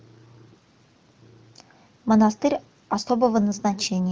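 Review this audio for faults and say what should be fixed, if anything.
No faults turn up in this audio, so nothing needs to be fixed.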